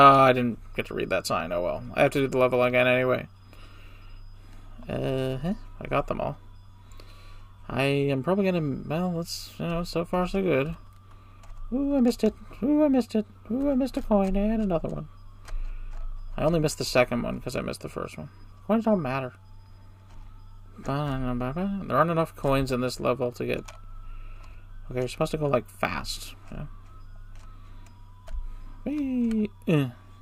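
No technical faults are audible anywhere in the recording.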